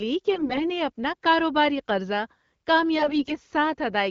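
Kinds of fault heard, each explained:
AMR bit errors: flipped less-protected bits make two brief speech stretches hoarse and gargly while pitch and level hold, unlike lost frames, which mute or smear.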